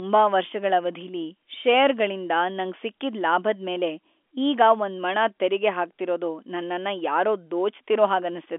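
No technical faults are audible.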